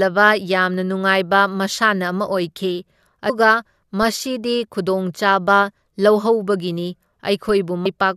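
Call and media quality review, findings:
Damaged data in a compressed stream at 3.28 s and 7.85 s. Brief chirps, squawks, clicks or short holes in the speech, each under 20 ms. Component: the compressed stream or file. Corrupt frames are misread. The decoder loses sync and jumps ahead to the next valid frame header.

DC step at 4.03 s and 7.49 s. Low thump or click each time. The speech carries on unchanged. Component: converter or input stage, where the waveform's zero line jumps suddenly. The offset then decays away through a 20 Hz high-pass.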